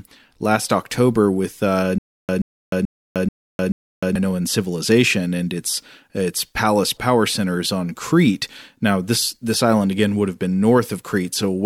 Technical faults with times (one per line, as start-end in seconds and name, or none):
1.98-4.15 stutter with silent gaps